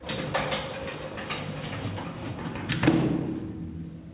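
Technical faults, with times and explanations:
No technical faults heard.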